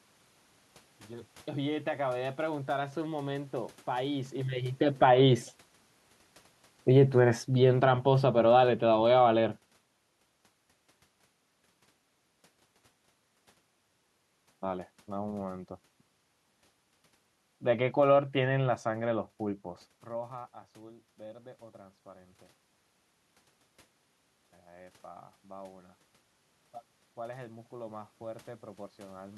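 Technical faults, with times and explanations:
5.14 to 5.55 s, automatic gain rising: the gain control decides things have gone quiet and pushes its gain up by about 4 dB over roughly 0.4 s. You can tell it's the processing and not the person because the room noise comes up right alongside the speech. Just before this, around 4 s, the talker shifts position at the mic, which is a natural level change and not the system's doing.
6.82 to 9.73 s, automatic gain falling: now the control goes the other way, judging the input too hot and pulling its gain down by about 7 dB across nearly 3 s. The speech starts out loud and then sinks steadily, and the background noise sinks with it. That shared fade is the giveaway that a gain stage is doing it. A shift in the talker's distance would change the speech level while leaving the room noise where it was.
27.15 to 29.33 s, automatic gain rising: near the end the gain climbs again by about 4 dB, this time stretched over a little over 2 s, so it's a slow swell rather than a quick bump. 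Speech and room noise lift together, which again points to the gain control. The level change around 19.5 s is different: that's the talker moving relative to the mic, and the room tone stays put there.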